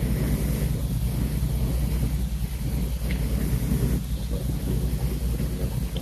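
A speech recording with no technical fault to point to. Nothing in it calls for a time stamp or a cause.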